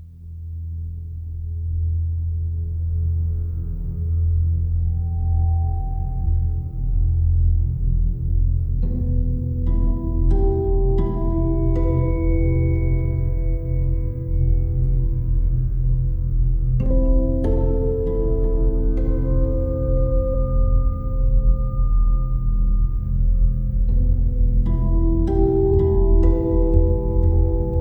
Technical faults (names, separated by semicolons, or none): damaged data in a compressed stream